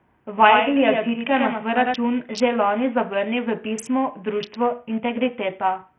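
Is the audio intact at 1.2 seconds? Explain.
No. At 1.2 seconds the speech is heard twice: a second full-band copy, about 5 dB quieter, trails the original by about a tenth of a second, with no decay or room colour. This doubled audio track is already running when the clip opens and stops abruptly at 1.94 s, just before "že lani". The likely cause is the same signal being captured a second time through a slower path, or two out-of-step copies left in the mix.

The whole clip, 1.2 seconds included, also sounds dull and gritty: the treble is thin and unstable, and a rough quantisation noise with aliasing sits on the speech. This is heavy damage from Bluetooth SBC compression, likely at a low setting that fits roughly 48 kbps. The codec splits the audio into a few wide sub-bands and shares out bits without a hearing model. The weak upper bands get starved, and the rest are quantised coarsely.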